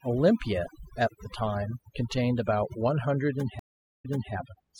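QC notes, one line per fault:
Throughout, overdone noise removal: the noise reducer is set too hard, cutting bands near its noise estimate, leaving near-silent background with twinkling specks.
3.59 to 4.33 s, stream reconnect: the connection dropped and a fresh decoder restarted, giving 0.39 s of silence, then speech resuming 0.34 s earlier, repeating a moment.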